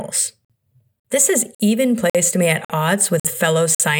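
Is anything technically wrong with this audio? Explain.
Yes. There is a gap between chunks, repeating seven times at 0.45, 1.00, 1.55, 2.10 (just after "has even"), 2.65, 3.20 and 3.75 s. The speech arrives in 0.5 s chunks, and 50 ms of silence sits between each one, as if every block starts late. Nothing is lost, but the speech is broken by short holes at a steady 0.55 s rhythm.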